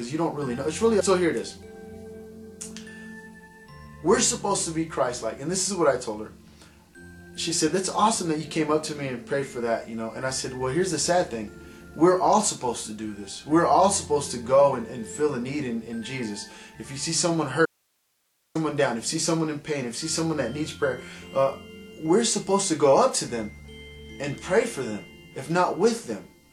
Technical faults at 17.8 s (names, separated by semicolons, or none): audio dropout to a faint residue